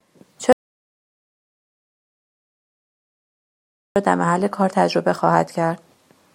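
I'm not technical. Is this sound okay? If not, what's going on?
No. From 0.53 s to 3.96 s the speech cuts out abruptly and about 3.4 seconds go completely dead before it resumes. This is an audio dropout to silence, likely from the microphone or connection briefly failing while recording carried on. Unlike a natural pause in speaking, the gap has no faint room background at all. It is plain silence that starts and stops mid-flow, and whatever was said during it is lost.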